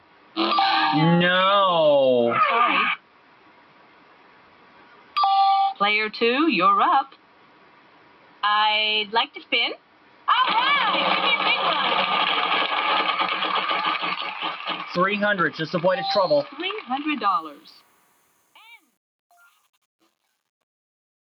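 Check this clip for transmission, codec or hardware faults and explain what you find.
Two faults run through this audio: a speech-tuned noise suppressor acting on non-speech material, and truncation distortion in the closing fade.

Noise suppressor applied to music or sounds: across the whole clip the level pumps and thins, with sustained parts and tails sinking while sharp onsets pass. The suppressor, built for voice, mistakes steady tones and ambience for background noise and keeps riding its gain, swinging by something like 10 dB, so decays flutter rather than ring out naturally.

Sound cut by the noise suppressor: at 0.0–0.37, 2.97–5.16, 7.07–8.43, 9.28–10.28, 14.17–14.97, 16.43–16.92, 17.41–18.85 and 19.31–19.67 s, held or fading material audibly drops away, by about 11 dB at its deepest (about 10 dB at 14.17 and 19.31 s). In each stretch the suppressor judged the sustained sound to be noise and clamped it harder than its surroundings, cutting decays short while transients stay intact.

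Truncation distortion on a fade: from 17.30 s to the end at 21.2 s the fade-out turns grainy, worst from 17.89 s onward, where the quietest part sounds grittiest. The fade was computed without dither at too coarse a resolution, which fits an 8-bit stage, so the shrinking waveform collapses into a few square steps instead of tapering cleanly.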